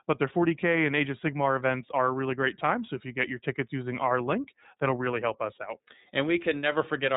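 Throughout the speech, the iLBC codec cuts everything above 3.8 kHz, and its independently coded 30 ms frames, consistent with about 13.3 kbps, leave a plainly audible rough, synthetic edge.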